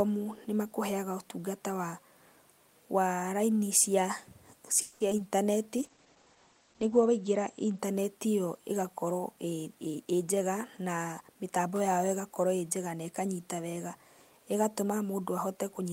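At 4.81 s the speech stops moving forward. The last sound is drawn out as a fading buzz until 5.02 s. That is a call audio freeze, likely caused by packets held up in transit while the jitter buffer ran dry. The receiver stretched the final sound across 190 ms. When the audio resumes, it picks up exactly where it stopped. Nothing is lost. The gap simply pushes everything after it 190 ms later.

Right after that come two short concealed packet losses. The first runs from 5.10 to 5.13 s and the second from 5.17 to 5.20 s. In each, about 20 ms of speech never reached the decoder in time. The receiver covered each hole by extending the preceding sound for roughly 10 ms, then blended back into the real signal. Each one is heard as a quick smear or wobble.

From 5.78 to 7.85 s there is a call bitrate drop. The encoder's rate falls from 40 kbps to 11 kbps, which points to a sharp fall in the estimated bandwidth. 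At the lowest rate, held for 1.27 s, the audio band shrinks from 20 kHz to 8 kHz. The speech turns muffled and rough. Sibilants lose their sharpness, and there is a coarse, watery texture. Clarity returns once the rate climbs back.

From 9.92 to 11.68 s a jitter buffer speed-up is audible. The buffer was holding more audio than its target. To cut the delay, the receiver repeatedly removed short slices, each one or a few pitch periods long. About a fifth of a second disappears in total. The speech runs at about 111% speed while its pitch stays the same. The result sounds hurried.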